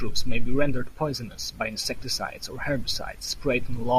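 No technical fault can be heard anywhere in this short speech recording.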